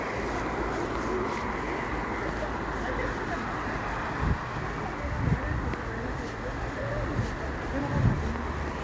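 Nothing's wrong here: it's a recording of sounds carried over a call link, and the way everything stops at about 8 kHz is just what you'd expect from a wideband call codec along the lines of G.722, not a fault.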